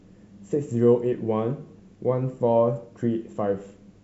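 Nothing stood out on listening to this speech, which carries the clear, wideband quality of G.722 telephone coding at 64 kbit/s.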